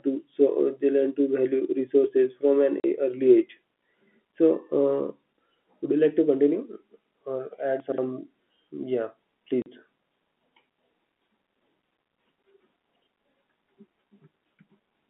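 A speech clip carried over a telephone line, band-limited to roughly 200 Hz to 3.5 kHz by G.711 coding. It has two kinds of fault. The first is packet loss filled with silence. The sound drops out abruptly at 2.80 s and again at 9.62 s. Each gap lasts 40 ms, which fits two lost 20 ms packets. The receiver had nothing to play, so it inserted silence. Both holes have hard edges. The second is chunks out of order. Two short stretches sound garbled. The first runs from 7.80 to 7.98 s. There, a 60 ms chunk plays two chunks later than it should. The second runs from 12.90 to 13.02 s, with a 60 ms chunk one chunk late. No audio is missing. The order is wrong, with hard joins where the chunks meet.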